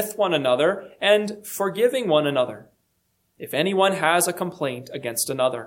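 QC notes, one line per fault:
No faults heard anywhere in this clip.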